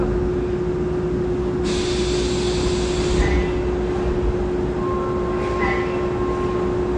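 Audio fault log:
Throughout, AAC compression: dull, smeared sound with plainly audible coding damage and nothing above 9.6 kHz, likely AAC-LC squeezed to a bitrate around 32 kbps.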